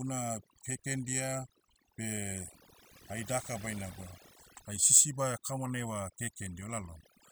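From start to finish the background drops to near silence dotted with twinkling specks: overdone noise removal. A noise reducer set too strong is cutting individual frequency bands near its noise estimate, taking quieter parts of the speech with them.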